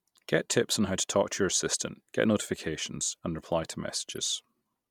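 Right after "notifications and reply to", from 4.11 to 4.18 s, there's a corrupt frame decoded. A few damaged frames got played anyway, so misread data throws energy into the wrong frequencies, giving a quiet chirpy blip peaking around -40 dBFS.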